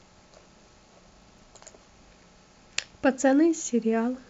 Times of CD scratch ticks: 1.22-1.71

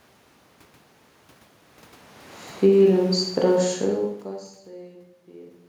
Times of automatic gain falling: 2.49-5.01

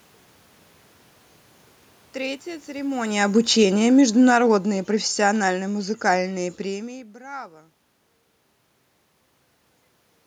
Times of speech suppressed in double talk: none

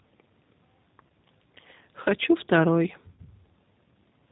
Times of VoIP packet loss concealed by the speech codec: 1.08-1.11, 3.12-3.20

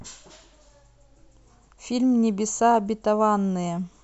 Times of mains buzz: none

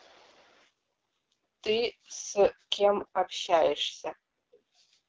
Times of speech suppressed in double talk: none

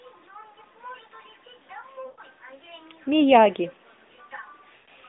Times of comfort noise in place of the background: none

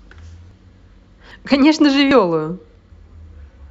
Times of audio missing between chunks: 0.51, 1.31, 2.11

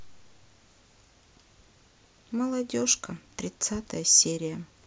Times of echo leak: none

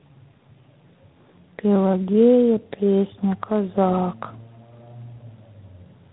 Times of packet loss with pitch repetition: none

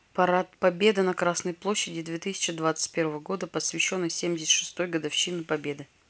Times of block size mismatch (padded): none

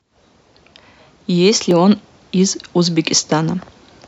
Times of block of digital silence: 1.71

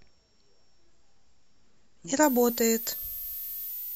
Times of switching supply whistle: 2.23-3.96

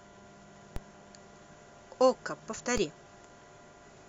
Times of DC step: 0.76, 2.77

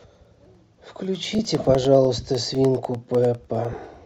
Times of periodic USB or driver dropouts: 0.15-3.95

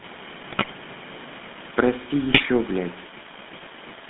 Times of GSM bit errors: 0.50-0.75, 2.30-2.45

